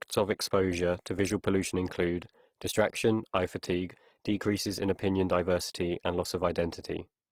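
Throughout the speech, the signal has likely been squeezed through Opus compression in its music-oriented CELT mode, at a rate that points to roughly 16 kbps. Starved bands are filled with folded or noise content, so the speech sounds plainly rough and grainy despite keeping full bandwidth.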